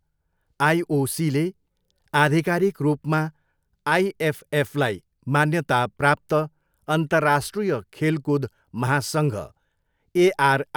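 No technical faults can be heard anywhere in this speech recording. Nothing breaks into the audio at any point, so there is no event to place in time.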